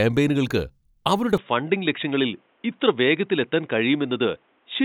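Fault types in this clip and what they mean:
Input switched to a poorer device: from 1.38 s speech stops above 3.8 kHz and gains faint new noise, likely a change of input device.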